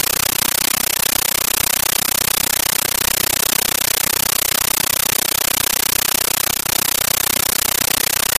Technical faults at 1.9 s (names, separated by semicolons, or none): compressed stream played as audio